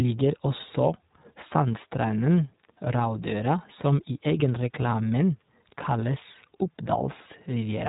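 From start to finish the speech sounds boxy and slightly rough, with a buzzy, synthetic edge and nothing above about 3.8 kHz. That is iLBC codec damage: each 20 ms frame is coded on its own, consistent with 15.2 kbps narrowband mode.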